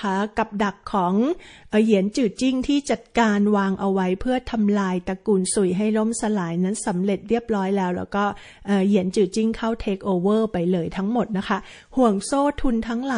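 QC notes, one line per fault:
Throughout: MP3 compression. Treble is cut at a fixed point and weak detail flickers frame to frame, giving a watery, swirly texture with metallic chirps, unlike a plain low-pass; the damage fits a starved bitrate around 40 kbps, likely MP3.
2.12–2.14 s and 2.35–2.38 s: pre-echo. Hiss about 13 to 14 dB above the surrounding floor smears 22 ms and 29 ms ahead of two sharp attacks, which sound softened. Because it comes before the attack, not after, it is not a click or noise burst.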